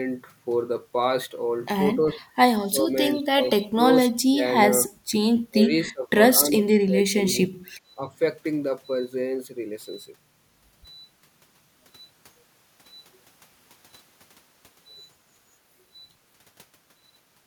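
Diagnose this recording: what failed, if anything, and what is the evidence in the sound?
The speech keeps ducking out between about 2.1 and 8.1 s: at 2.09, 2.66, 3.14, 4.1, 4.88, 5.49, 6.43 and 7.91 s. The dips at 2.09 and 7.91 s are shallow, about 5 dB, and the ones in between bite down about 25 dB for a few hundred milliseconds each. That pattern points to call processing, likely speech suppressed in double talk, where the echo canceller mistook the talker for echo and clamped down.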